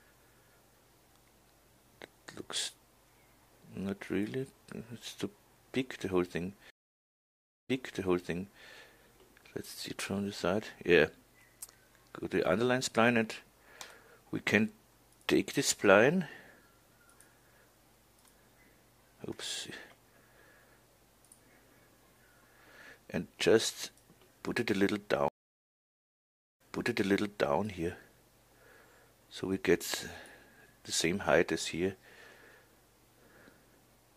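At 6.70 s the audio cuts out for about 0.97 s, and at 25.28 s for about 1.3 s. Both are stream reconnects: the connection dropped, the player restarted a fresh decoder, and the server resent a burst, so playback resumes about 0.97 s and 0.99 s earlier, repeating sound already heard. On a waveform each shows a flat gap followed by a brief fade-in. A spectrogram shows a blank column, then a repeated pattern, with recovery complete by 8.64 s and 27.58 s.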